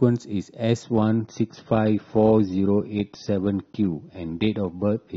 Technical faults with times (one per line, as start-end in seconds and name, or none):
0.83-5.17 adaptive stream at a lower bitrate